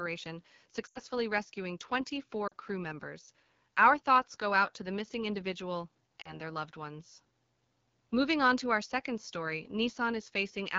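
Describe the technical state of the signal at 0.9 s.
Right at 0.9 s you're inside a short run of lost AMR speech frames, spanning about 0.87 to 0.99 s. Radio errors knocked out roughly 80 ms of speech, which fits a burst of four 20 ms frames. The decoder covered the gap by repeating the last good pitch and vocal tract settings at shrinking gain. Because wideband concealment fades quickly, you hear the speech drop away to near silence, then return a little weak and rough just after.

Underneath that, the AMR wideband (HD Voice) codec is running at a low rate throughout. The roughness fits one of the bottom modes, something like 8.85 kbit/s. The speech is built from a pulse-driven vocal tract model up to 6.4 kHz, with shaped noise filling 6.4 to 7 kHz. At this rate that model can't keep up, so the speech has a plainly audible raspy, gritty edge around this point as well.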